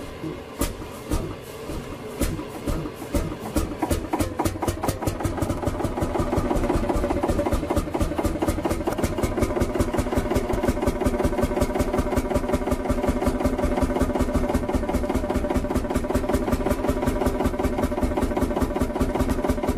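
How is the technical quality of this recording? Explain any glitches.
The recording is marred by compressed frames skipped, four times: 7.11–7.13 s, 8.90–8.94 s, 10.52–10.56 s and 19.30–19.32 s. Whole frames of the encoded stream never reached the output, either missing from the file or rejected by the decoder as damaged, so playback leaps forward. About a tenth of a second of audio vanishes at three of these points and roughly half that at 10.52 s.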